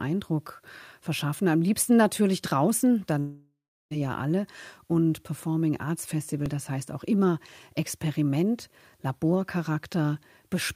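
From 3.19 to 3.93 s the speech gives way to a fading buzz and then silence, which is likely a long network dropout. It resumes with about 0.72 s missing, unlike a stutter that repeats audio.

At 6.46 s a single click marks a repeated buffer. A 1.33 ms piece plays twice, which fits a 64-sample buffer and is too short to hear as a stutter.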